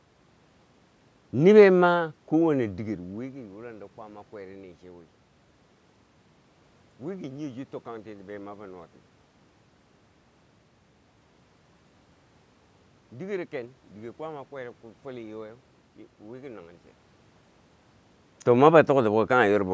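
No technical faults can be heard anywhere in this speech recording.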